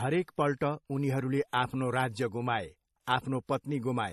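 Speech, with transcoding between lossy codecs heard throughout. Nothing sounds above 13.1 kHz, and two layers of artefacts blur together. It likely went from low-rate MP3 into WMA.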